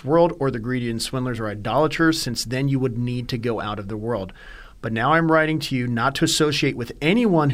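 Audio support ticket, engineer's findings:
No technical fault found on inspection; the speech signal shows no defect attributable to any component in the chain.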